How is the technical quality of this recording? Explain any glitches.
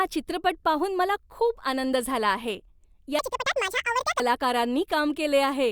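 The recording has one clear glitch, a section at the wrong speed. From 3.19 to 4.20 s the speech runs about 1.9 times too fast. Pitch rises with it, by around ten semitones. The voice turns high and hurried, then snaps back. Likely cause: that stretch was played against the wrong clock.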